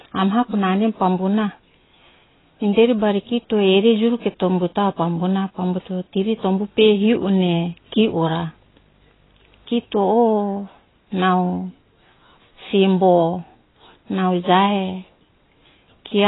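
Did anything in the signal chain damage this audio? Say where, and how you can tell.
Yes, two stages left marks. The codec stage did the most. Across the whole speech clip, nothing is present above 3.9 kHz. The sound is dull and smeared, and the codec damage is heavy. The likely cause is AAC compression, AAC-LC at a very low rate. The sound fits about 16 kbps. At that rate the encoder has too few bits for its 1,024-line frames. It cuts the top band away and coarsely quantises what remains.

The analogue wiring picked up a video or display buzz from 6.21 to 10.09 s. It is a 50 Hz buzz at the picture's field rate, with hash above it. A thin tone at 15.6 kHz sits alongside it, which matches a display's line rate. The buzz lies well below the speech, around 35 dB down. A screen or video cable coupled into the audio path while the recording was made.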